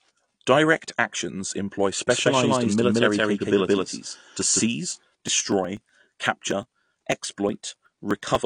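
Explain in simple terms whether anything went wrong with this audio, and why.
The speech was likely squeezed into a small, low-quality format and later saved again as a large file, a fault called low-bitrate audio saved at a high bitrate. It sounds dull throughout, with nothing above 9.8 kHz.

From 2.07 to 4.61 s, just after "actions employ", a doubled audio track plays. A second, equally loud copy of the speech trails about 150 ms behind, giving a sharp, clean echo.

From 4.91 to 8.35 s there are periodic USB or driver dropouts. Every 0.123 s, about 2 ms of sound is skipped, producing around thirty evenly spaced ticks.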